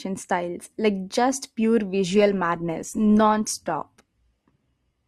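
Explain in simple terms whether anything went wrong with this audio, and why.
From 2.14 s, after "styles like just pure", the speech suddenly gets rougher, with more digital artefacts. This is an adaptive stream at a lower bitrate, because the connection slowed.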